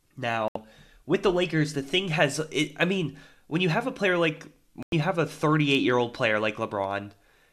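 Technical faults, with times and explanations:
0.48–0.56 s and 4.83–4.93 s, digital broadcast dropout: the speech mutes for about 72 ms just before "with the", then for about 96 ms between "have a player like" and "you have a", which fits three and four lost frames of roughly 24 ms. The receiver silenced corrupt or missing frames until good ones returned, so that audio is gone. The waveform shows flat gaps, and the spectrogram shows blank vertical bands across all frequencies.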